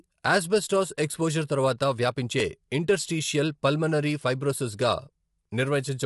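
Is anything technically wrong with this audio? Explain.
Yes. Throughout the clip the speech sounds rough and grainy, with a hiss-like fill between the pitch harmonics and nothing at all above 11.7 kHz. This is likely low-delay AAC compression (AAC-ELD) at a rate that fits around 32 kbps. Its very short frames cannot separate closely spaced harmonics, and too few bits remain for the upper band. On a spectrogram, the harmonic stripes look smeared with speckled noise between them, and the energy stops at a hard ceiling at 11.7 kHz.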